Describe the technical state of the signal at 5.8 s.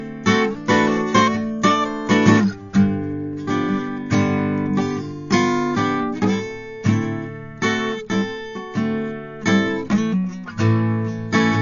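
At 5.8 s the music sits under a hard ceiling. Nothing is present above 7.1 kHz, and this holds for the whole clip, not just this moment. The sound is dull and closed-in, with the smeared, watery grain of heavy compression. The likely cause is low-bitrate audio saved at a high bitrate. A very low-bitrate encode, consistent with AAC at around 32 kbit/s, stripped the top end and left its artefacts. A later high-bitrate MP3 encode kept that damage intact and could not restore what was lost.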